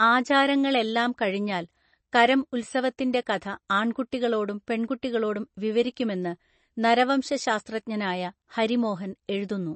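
From start to finish the speech carries plainly audible MP3 compression damage, or at least that's the likely culprit. Nothing gets through above about 8.3 kHz, so the top end is simply gone and the s sounds come out dull and a bit chirpy. Underneath there's that watery, swirly quality where faint detail flickers in and out frame to frame, and the whole thing fits an encoder starved down to something like 32 kbps.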